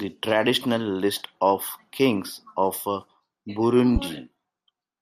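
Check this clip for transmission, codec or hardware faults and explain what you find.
There's one fault here, a single loud pop from 3.96 to 4.00 s, landing roughly ten decibels above the speech, which keeps going underneath it. It's likely a sudden voltage step, say a switch, static or a driver glitch, that the downstream circuitry turned into a sharp thump.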